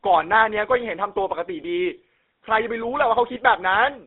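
Throughout, the speech carries the buzzy, gravelly roughness of the GSM full-rate codec, which fits its 13 kbps coder: a pulse-driven vocal-tract model rebuilds it from sparse excitation. A spectrogram shows energy confined between 250 Hz and 3.7 kHz, with coarse, smeared harmonics.

Lost GSM frames occur at 1.62 to 1.65 s and 3.34 to 3.37 s, each about 20 ms. The decoder repeats the last good frame, giving a brief metallic ring. The waveform shows a short stretch, and the spectrogram shows frozen, smeared bands.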